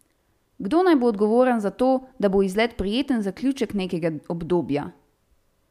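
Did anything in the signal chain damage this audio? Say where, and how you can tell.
No, nothing in the signal chain has left an audible mark on this speech recording. I can't point to any stage, from capture through to playback, where the sound has been harmed.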